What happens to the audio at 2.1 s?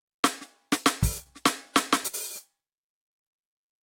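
At 2.07 s the music briefly freezes: the sound playing at that instant is stretched into a held, steadily fading tone for about 60 ms, and then the music picks up again at 2.15 s slightly further along, with a short stretch of it skipped. This is a burst of packet loss. Consecutive packets never arrived in time, so the receiver extended and faded the last sound it had to cover the gap, and about 60 ms of the original music was lost.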